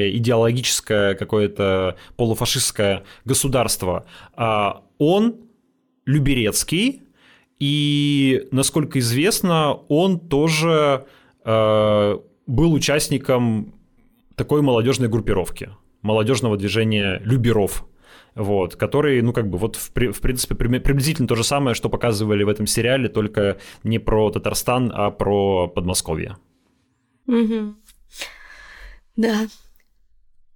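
No technical faults can be heard in the speech.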